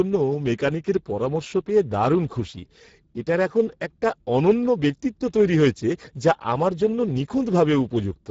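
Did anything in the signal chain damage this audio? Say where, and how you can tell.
Yes. Throughout the speech the sound is noisy and hoarse, with nothing above 7.7 kHz. This is Speex codec damage at the codec stage: the CELP coder is starved of bits for the excitation, which fits a bitrate of roughly 10 kbps.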